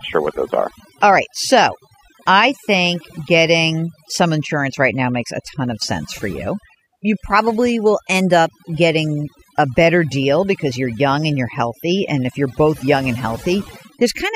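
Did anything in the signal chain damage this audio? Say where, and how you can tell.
Yes. Overdone noise removal runs through the whole speech clip, a processing-stage fault. Between phrases the background collapses to near silence with twinkling specks. A suppressor set too aggressively is zeroing bands near its noise estimate, taking quiet speech components with them.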